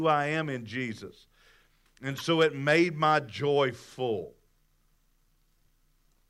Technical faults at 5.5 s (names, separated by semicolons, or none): none